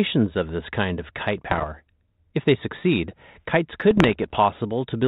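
From 1.51 to 1.67 s and again from 3.91 to 4.37 s, bit errors on an ADPCM link, at under one percent, corrupt the G.726 stream. Each flipped bit throws off the decoder's predictor and step size, so pops and rasping bursts ring briefly. The waveform shows spiky level jumps; the spectrogram shows broadband vertical smears up to the 4 kHz ceiling.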